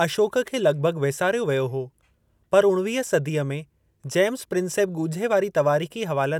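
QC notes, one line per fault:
Nothing stood out on listening to the speech in this clip.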